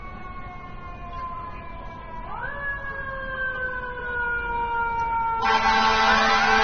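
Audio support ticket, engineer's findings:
Dull, band-limited sound throughout, nothing above 6.3 kHz. Two kinds of codec artefact heard together. Probable component: encode chain. Likely cause is transcoding between lossy codecs, an MP3 stage re-encoded to AAC-LC. The second encoder wastes bits on the first one's artefacts while adding its own, and the lowest cut-off persists. The sound points to bitrates near 38 then 27 kbit/s.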